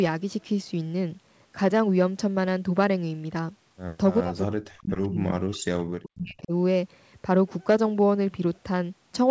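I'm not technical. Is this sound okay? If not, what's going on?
No. From 4.22 to 6.53 seconds, the problem is most likely speech suppressed in double talk. On a call, both people seem to have talked at once, and the system that removes loudspeaker echo couldn't tell this talker's voice apart from that echo, so it turned everything down. For about two seconds of that stretch, the voice drops away sharply, at its worst almost to silence.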